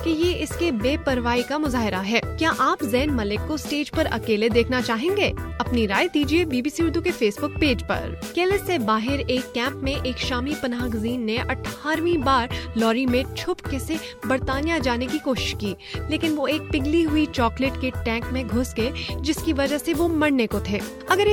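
No faults found anywhere in the recording.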